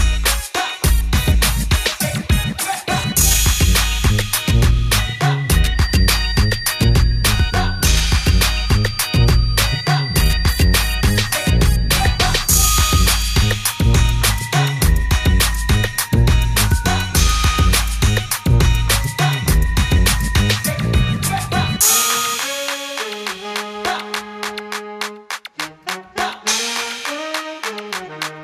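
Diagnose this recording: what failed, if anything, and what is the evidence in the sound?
Feedback whistle, 5.69 to 13.57 s, at the playback-to-microphone stage: a single-pitch 4.7 kHz tone about 15 dB below the sound, likely a speaker-microphone loop held just short of runaway.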